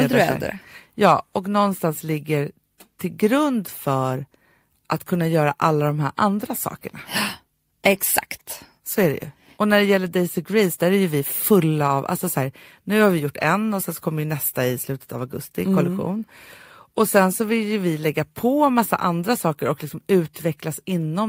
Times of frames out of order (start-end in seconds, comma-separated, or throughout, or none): none